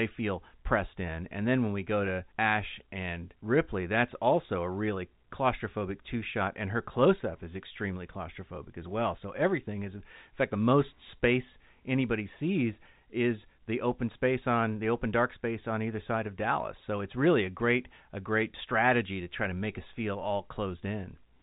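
There are no technical faults to describe in time order; the speech comes through a G.711 telephone channel, with nothing above 3.8 kHz.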